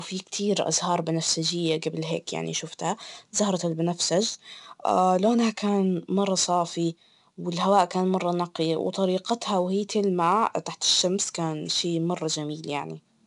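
Speech with 4-bit ADPCM compression throughout: gritty hiss that rides the speech level and vanishes in pauses, unlike steady noise, with nothing above 10.7 kHz, which fits roughly 89 kbps.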